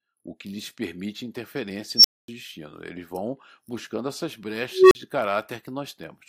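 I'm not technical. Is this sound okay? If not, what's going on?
No. There is an unstable filter fault. A processing filter runs away and its tone builds until it cuts out. After "que lhes permite interferência" at 1.96 s, a high squeal swells and drops to a short silence. After "vão buscando essas" at 4.71 s, a low beep does the same.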